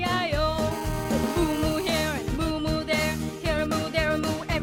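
From 0.71 s to 1.91 s there's GSM phone buzz: a nearby 2G handset on a call pulsing at 217 Hz, with the audio circuitry rectifying those bursts. It comes through as a steady, raspy, harmonic-rich buzz sitting about 16 dB under the sound.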